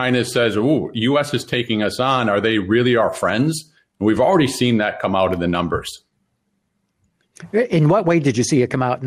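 No technical faults can be heard anywhere in the recording. There is no point in the audio that needs a time mark or an explanation.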